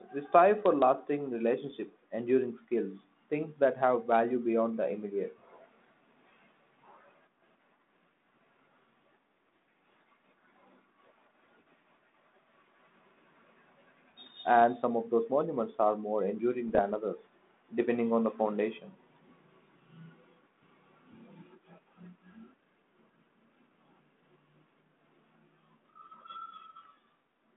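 Short pops and rough, crackling bursts with brief jumps in level occur at 1.68 to 1.74 s, 16.68 to 16.83 s and 26.83 to 26.85 s. These are bit errors on an ADPCM link: a small fraction of a percent of flipped bits throws the decoder's step size and prediction off, so each error rings on briefly through the telephone-band speech.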